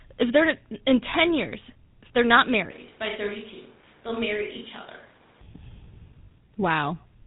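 GSM full-rate coding runs through the whole clip, and its damage is plainly audible. The codec rebuilds the speech from a vocal-tract model excited by a sparse, regularly spaced pulse train, which fits the 13 kbps full-rate mode. The result is a gritty, buzzing texture on every voiced sound. Nothing is left above 4 kHz, so sibilants and consonant edges come across dull and smeared rather than crisp.

A switch to a distant microphone arrives at 2.71 s, right after "years if they're not", and lasts until 5.41 s. The speech suddenly turns hollow and roomy, loses body in the low end, and drops a few decibels in level. A layer of room noise becomes audible, though it stays well beneath the speech. The likely cause is that the close microphone dropped out and a farther pickup carried the signal, before the close sound abruptly returns.

Lost GSM frames occur from 6.26 to 6.29 s, with the length pointing to a single missing frame. 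The decoder concealed the gap by repeating the last good frame's parameters, which produces a brief metallic, rasping ring in place of the real speech. The loss is short enough that the sound never fades toward silence before normal decoding resumes.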